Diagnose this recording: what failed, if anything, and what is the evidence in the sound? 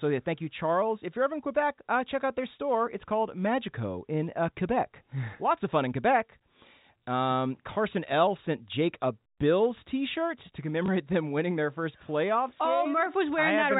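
At the network stage, packet loss with last packet repeated: one 20 ms stretch went missing at 10.86 to 10.88 s, just before "them winning their first", which fits a single lost packet. The receiver replayed the previous 20 ms of audio to fill the gap, producing a brief blip within the 4 kHz-limited G.711 telephone band.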